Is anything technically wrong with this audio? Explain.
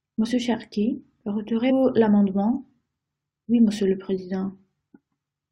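Yes. At 1.69 to 1.71 s, damaged data in the compressed stream makes the decoder lose sync and hunt for the next frame, producing a brief glitch in the speech.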